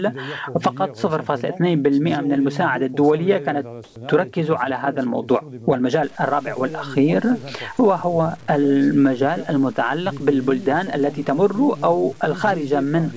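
The audio has passed through a call path whose band stops at 8 kHz, which points to a wideband codec such as G.722. From 3.84 to 3.96 s the real background disappears for 120 ms. A smooth, featureless hiss takes its place, about 4 dB quieter. The background sits about 32 dB below the loud parts. This is comfort noise in place of the background. The likely cause is discontinuous transmission. The sender's voice detector judged the moment silent and stopped sending. The receiver then filled the gap with synthetic noise. At 3.93 s the returning sound starts abruptly. It has no soft beginning, and about 30 ms of its start is missing. This is an onset clipped by the voice detector. The detector was likely slow to register that sound had resumed. So those first milliseconds were never sent, and comfort noise covered them. From 6.03 s to the end, the audio turns grainy. The roughness follows the sound itself. 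Quiet passages break up most and sputter near silence. The error sits around 30 dB below the signal. This is low bit depth without dither. The sound fits samples likely truncated to about 7 bits with no dither. The rounding error then stays tied to the waveform instead of spreading into a smooth noise floor.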